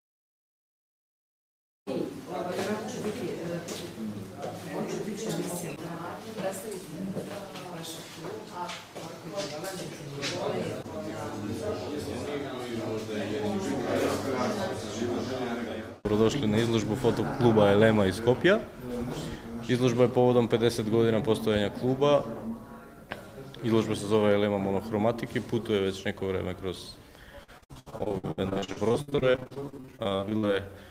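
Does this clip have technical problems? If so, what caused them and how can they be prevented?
Yes. Repeated packet loss (robotic sound) runs from 27.43 to 30.45 s: about 45 short dropouts, the longest 65 ms, are each patched by stretching the preceding sound, so roughly two-fifths of that stretch is concealment and comes out choppy and robotic. A more stable network path, with jitter buffering and error correction, prevents it.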